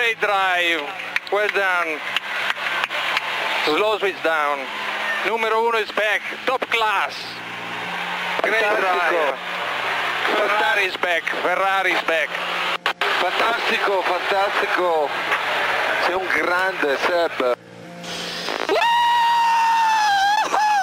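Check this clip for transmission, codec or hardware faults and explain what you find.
One fault: CD scratch ticks from 15.53 to 16.59 s, six brief ticks of up to about 2 ms at roughly five per second. A scratch is corrupting more data than error correction can repair on each disc rotation, so the player patches over the damage.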